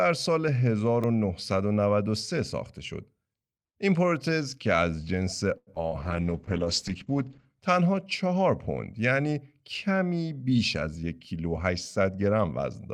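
Speech clip with five kinds of transport and playback fault. At 1.04 s a block of digital silence drops out for just 0.67 ms, which fits a 32-sample buffer going unfilled. The cut to zero and back has no fade, so it comes across as a single tick rather than the smeared blip of concealment. From 5.57 to 5.84 s a short stall from a late packet holds the sound for about 93 ms while the jitter buffer waits. Nothing is lost, so the hold reads as an unnatural stretch with a faint buzz, not as a gap. The delay stays about 93 ms longer afterwards. Inside and just after that stretch, two short concealed packet losses at 5.75 to 5.78 s and 5.89 to 5.93 s each replace 20 ms of real audio with an extrapolated continuation. They sound like a brief wobble or smear, and a short consonant can go missing, unlike the stall, which only delays. From 6.03 to 7.53 s a call bitrate drop takes the encoder from 40 to 11 kbps, holding the lowest rate for 1.44 s. 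Audio bandwidth narrows from 20 kHz to 8 kHz, so the speech turns muffled and watery for that span rather than breaking up. From 10.51 to 11.53 s a jitter buffer speed-up trims pitch-period-sized pieces to shed about a tenth of a second of backlog. The speech runs at 109% speed with unchanged pitch, sounding hurried, which sets it apart from a simple resampling that would raise the pitch.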